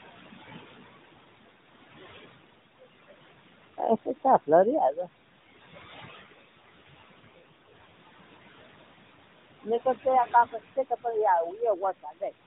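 Throughout the clip, a noise suppressor pulls the steady room noise down by about 19 dB frame by frame, so the background sinks between phrases and rises under them. From 6.24 to 7.74 s, just after "pero ino babiero", an AMR rate drop forces the codec from 12.2 to 5.9 kbps; the speech turns rougher, buzzier and more synthetic while the bandwidth stays the same. The noise suppressor then mistakes speech for noise, cutting it by up to about 17 dB within 10.52 to 11.06 s (roughly a fifth of a second affected) and up to about 22 dB within 11.5 to 12.45 s (nearly half a second), leaving those sounds swallowed and faint.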